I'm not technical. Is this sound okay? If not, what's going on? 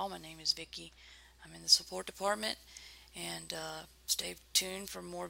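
No. From 1.87 to 4.88 seconds there is pre-emphasis left on: the treble was deliberately boosted before storage, and the matching cut that should undo it on playback never happened. That stretch sounds thin, overly bright and hissy, with sharp s sounds.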